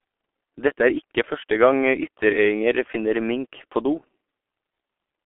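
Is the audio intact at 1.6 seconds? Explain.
No. At 1.6 seconds, as throughout the clip, the speech carries G.723.1 codec damage. This low-rate coder, likely running near 6.3 kbit/s, keeps roughly 250 Hz to 3.4 kHz and drops everything above 3.6 kHz. Its coarse frames leave the speech muffled and hoarse, with smeared consonants.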